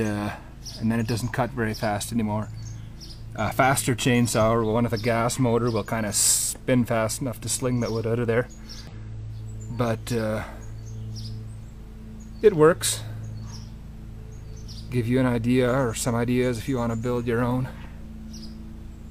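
At 8.87 to 8.93 s, and again at 14.63 to 14.68 s, the audio breaks for about 56 ms and 50 ms respectively with damaged data in a compressed stream. Corrupted bytes reach the decoder, which misreads or rejects those frames and hunts for the next valid header. The result is a brief chirp, squawk, click or hole. Unlike a plain buffer dropout, which only leaves silence, this can produce garbled codec sound.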